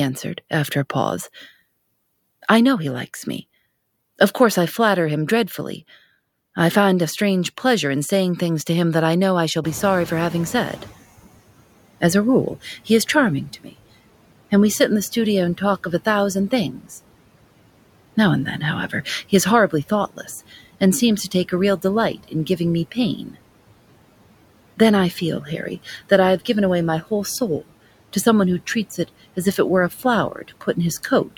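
A speech recording runs through a noise suppressor that is pulling the background down by about 18 dB throughout, leaving noise suppressor artifacts: the noise dips between words and swells back under them. Near 9.5 s the room noise jumps by about 22 dB. Just after "I know I shall", from 9.63 to 10.95 s, the noise suppressor is catching up: the new noise comes through only partly reduced, at about 13 dB, and sinks as the estimate adapts over 1.32 s. The suppressor also cuts speech it mistakes for noise at 12.64–13.74, 15.58–16.91, 18.58–20.53, 21.31–23.36 (after "and seems to"), 24.77–26.49, 27.02–28.16 and 29.08–31.37 s (after "someone who treats"). Within each span, brief stretches of roughly a tenth to under half a second drop by about 13–18 dB, so soft consonants and word endings sound swallowed.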